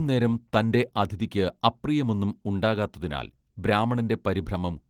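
Nothing goes wrong anywhere in this speech clip, which just carries the light, ordinary traces of Opus voice compression running at 20 kbps in its hybrid mode with the full band kept up to about 20.4 kHz.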